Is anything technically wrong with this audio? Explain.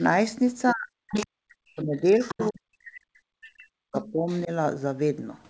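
Yes. The talker's speech repeatedly drops out while a second voice bleeds in, both typical of a call where both sides spoke at once.

Speech suppressed in double talk: the talker sinks sharply, by roughly 35 to 40 dB at the deepest, from 0.72 to 0.92 s, from 1.3 to 2.03 s, and across much of 2.34 to 4.5 s, where around a second and a half is swallowed. The likely cause is an echo canceller that couldn't tell the local talker from loudspeaker echo while the far end was also speaking, so it turned both down.

Other side's voice leaking through: a second voice surfaces at 1.09 to 1.27 s, nearly as loud as the talker (about 5 dB below). It appears again, quieter, from 1.8 to 2.52 s (about 15 dB down), then as faint scraps at 3.6 to 3.67 s and 4.02 to 4.42 s (about 30 and 25 dB down). This is likely far-end audio from the loudspeaker that the echo canceller failed to fully remove from the microphone signal.

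The absence of anything above 8 kHz matches the wideband G.722 call path.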